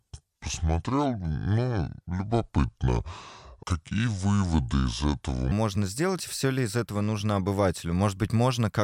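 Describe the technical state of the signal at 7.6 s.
At 7.6 s the speech signal is intact, with no audible fault at that moment.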